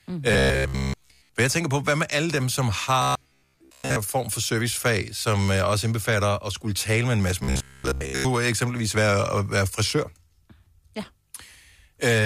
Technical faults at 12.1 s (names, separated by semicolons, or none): none